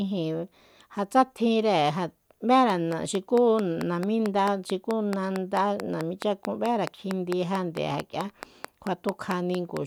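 A speech clip with a train of clicks from 2.7 to 9.78 s: around thirty similar, loud ticks at a steady 4.5 per second, likely interference, not random crackle.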